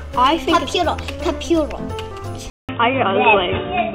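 At 2.5 s the recording most likely switched its input to a poorer device. A gap of about 0.19 s opens at the switch, then the sound returns dull and boxy with nothing above 3.8 kHz, its level shifted by about 5 dB, over a faint new noise floor roughly 50 dB down.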